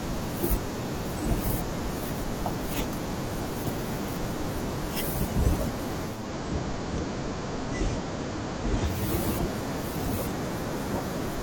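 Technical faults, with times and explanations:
6.04 to 9.13 s, digital radio blending to analogue: The speech loses its digital stream and the receiver cross-fades to the FM broadcast of the same station, then fades back at 9.13 s. Each blend takes about 0.29 s. The level drops by about 1 dB. A faint hiss, roughly 40 dB below the speech, rides underneath until the digital signal returns.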